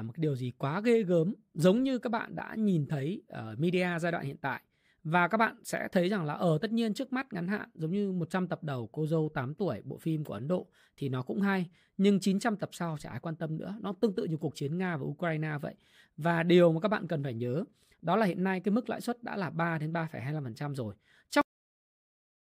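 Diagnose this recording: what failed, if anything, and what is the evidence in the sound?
Cut-off end at 21.41 s: the speech stops abruptly mid-sound and falls straight to digital silence, with no decay, for the final second. This points to the storage or buffer stage, where the last buffers were never written to the file.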